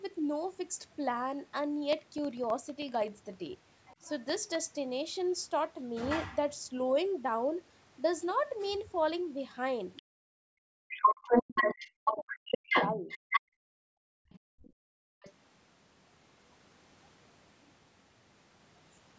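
From 1.93 to 4.62 s, periodic USB or driver dropouts occur: something stalls the audio driver or USB transfer every 64 ms, and each time about a millisecond of speech is replaced by silence. Roughly forty of these gaps produce an even train of small ticks, audible only while the talker is speaking.

Overlapping the end of that stretch, from 3.85 to 4.10 s, the other side's voice leaks through, most likely because the echo canceller left part of the loudspeaker signal in the microphone feed. It sits about 25 dB below the talker, a faint second voice in the background. The same leak returns briefly from 9.96 to 10.03 s, about 20 dB down.

From 10.32 to 13.09 s, the talker's speech is suppressed in double talk. With both sides speaking at once, the canceller likely fails to separate the two and pulls the near-end voice down, by as much as about 40 dB and for about two seconds in total. The talker fades and breaks up in pieces. 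Across almost the same span, from 10.91 to 13.41 s, the other side's voice leaks through at about 5 dB above the talker, so the far voice dominates.

From 13.41 to 15.22 s, the echo canceller gates the background hard while the loudspeaker plays. Room sound falls by up to about 40 dB, for roughly 1.5 s in total, and returns when the gate releases. Within this stretch, leaked far-end voice can be heard again from 14.29 to 14.70 s, about 25 dB down, and just after it, from 15.22 to 15.33 s, about 20 dB down.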